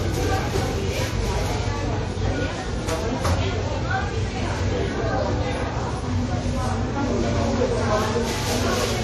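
Everyday sound, with smeared, watery artefacts of several kinds stacked together and nothing above 13.1 kHz throughout, likely from transcoding between lossy codecs, ending as low-bitrate MP3.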